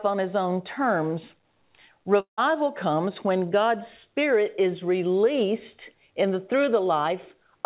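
From 2.20 to 2.39 s the speech breaks off, likely from a long network dropout. The last sound is stretched into a fading buzz that dies to silence before "comes when" resumes, with the lost audio simply gone. Unlike a brief packet loss, the concealment runs out and leaves an audible gap.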